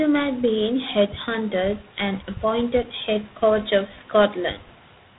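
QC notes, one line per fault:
Throughout: G.726 ADPCM. The speech is band-limited with nothing above 3.8 kHz, and a harsh, rasping hiss rides on it, rising and falling with the level of the speech. The coder sends only a few bits per sample describing the error of an adaptive prediction, so quantisation noise scales with the signal instead of sitting at a fixed floor. The plainly audible roughness fits the 24 kbit/s mode, three bits per sample.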